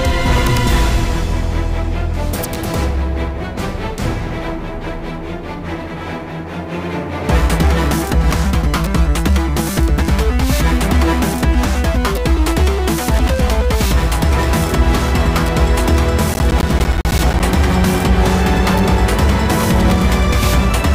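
From 16.34 to 17.4 s, a gritty crackle tears through the audio: processor overload crackle, with roughly twenty short buffers of about 10 ms missed and dropped to silence.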